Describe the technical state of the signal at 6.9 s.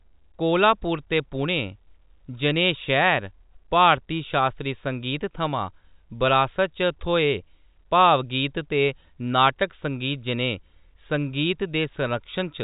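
At 6.9 s the speech is intact, carrying only the band limit of its G.711 telephone coding, with nothing above about 3.8 kHz.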